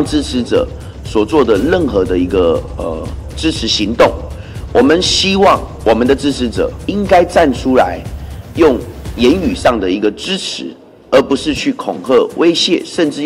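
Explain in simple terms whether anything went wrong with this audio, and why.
Hard clipping runs through the whole recording. The sound was pushed louder than the recording chain could hold, so the tallest peaks were sliced off flat. Only a small share of moments hit that limit, so loud spots crackle instead of sounding smooth.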